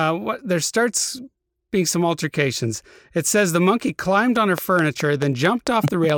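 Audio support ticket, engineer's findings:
Train of clicks, 4.36–6.11 s, after "says the monkey climbed". About ten similar pulses at a regular 4.6 per second, peaking roughly 15 dB over the speech. Likely external interference or a faulty connection or power supply. Steady pace and continuation through pauses rule out signal-dependent distortion.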